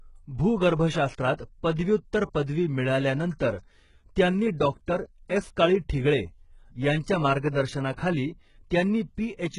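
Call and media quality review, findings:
Whole clip: treble is gritty and lispy on s sounds, nothing above 11.1 kHz. Likely HE-AAC compression at a very low bitrate; replicated highs don't match the real harmonics.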